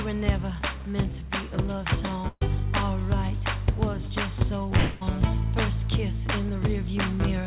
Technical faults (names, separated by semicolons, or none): burst of packet loss; long network dropout